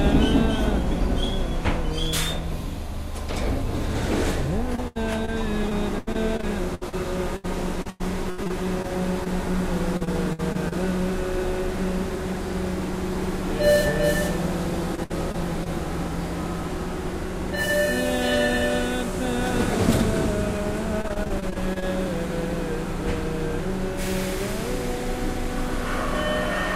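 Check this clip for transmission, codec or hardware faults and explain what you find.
The clip shows repeated packet loss (robotic sound) in four stretches: 4.75 to 9.28 s, 9.97 to 10.73 s, 14.95 to 15.68 s and 21.02 to 21.84 s. Audio packets kept arriving late or not at all, and each hole, mostly under 100 ms, was bridged by extending the preceding sound. The audio turns choppy, with short pieces missing. The densest stretches are around 10 s and 21 s, where concealment fills roughly a fifth of the time.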